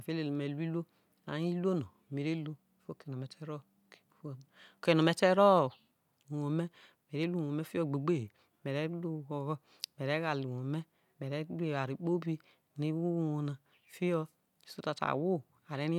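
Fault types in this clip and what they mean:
No fault types are present in this clip.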